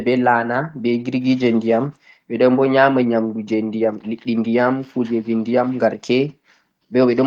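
No audible faults in this speech.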